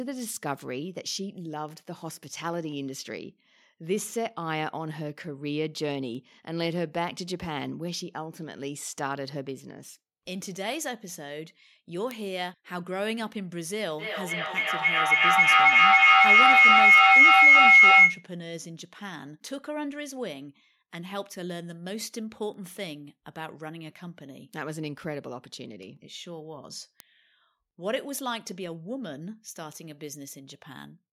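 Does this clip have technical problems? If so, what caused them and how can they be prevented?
Yes. Word clock ticks run from 0.19 to 29.98 s: about twenty single-sample ticks, roughly every 1.5 s. Their steady spacing, unlike random dropouts, points to a receiver clock drifting slightly from the sender's. Lock the receiving device to the incoming digital clock.

Feedback howl builds from 13.99 to 18.29 s. A tone near 2 kHz swells to about 18 dB above the speech and pulses roughly every 300 ms. The growth and pulsing at the loop delay set it apart from a steady interference tone. Keep only one device's microphone and loudspeaker active in a room on the same call.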